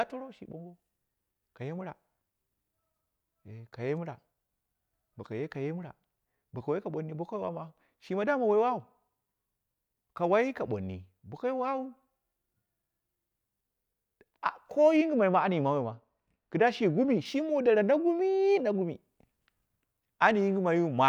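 A treble-cut de-emphasis filter was applied wrongly to this speech between 14.97 and 17.26 s, on audio that needed no such correction, so the response slopes smoothly downward above 1 kHz to about 8 dB lower at 10 kHz, leaving that stretch dull and muffled.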